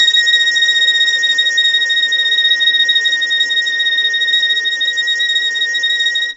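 Throughout, the music is grainy, noise between harmonics, nothing above 7.8 kHz: likely low-delay AAC compression; plain low-pass filtering wouldn't add grit.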